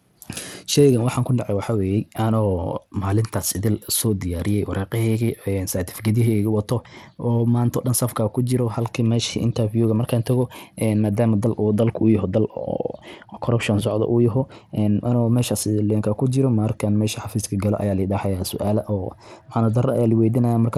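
Throughout, the speech likely passed through Bluetooth SBC compression at a bitrate that fits 96 kbps; treble flickers and drops out under gritty, aliased noise.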